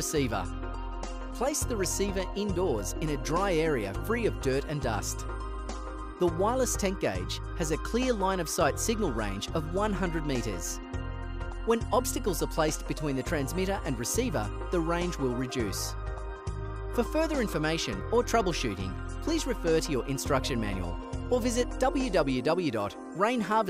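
No technical faults can be heard anywhere in this audio. Nothing in it points to a problem with how the sound was captured, processed or delivered.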